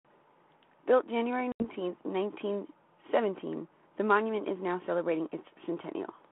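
Speech over a G.726 ADPCM line at 32 kbit/s, band-limited to 200 Hz to 3.4 kHz. At 1.52 s there's packet loss on the ADPCM call: a hard-edged 80 ms silence where a few packets dropped out. The decoder's predictor and step size lose sync, so the sound comes back slightly off until about 1.65 s.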